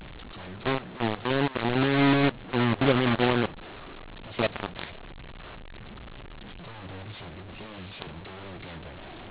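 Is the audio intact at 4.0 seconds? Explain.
No. The A-law telephone stream is being decoded as mu-law throughout the clip, 4.0 s included, a mu-law and A-law mix-up. Each 8-bit code maps to the wrong level, so loudness is scrambled, the speech turns harsh and distorted, and the quietest moments fill with noise.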